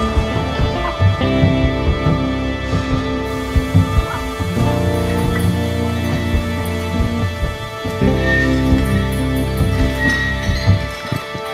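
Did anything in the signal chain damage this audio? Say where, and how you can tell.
No, nothing damaged this audio.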